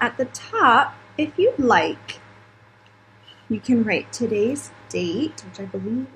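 Nothing technically wrong can be heard in this audio at any point.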